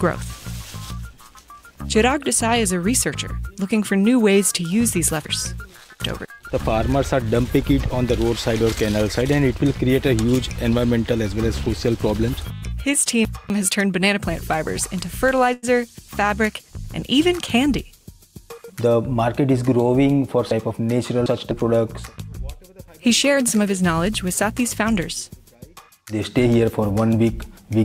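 From 5.25 to 6.25 s, 12.5 to 13.5 s and 20.51 to 21.51 s, chunks play out of order. A 250 ms chunk lands three chunks late, so the passage sounds jumbled with hard joins, yet nothing is lost, unlike a dropout. At 15.53 s a short stall from a late packet holds the last sound for 94 ms, then resumes from the same place, a held moment rather than a skip. From 17.57 to 19.02 s a jitter buffer speed-up trims around a tenth of a second in small pitch-period pieces. This runs the audio at 107% speed, hurried but at unchanged pitch.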